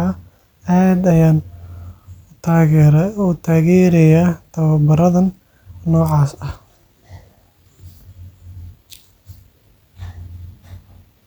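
No technical faults can be heard anywhere in the recording; the signal stays continuous and stable throughout.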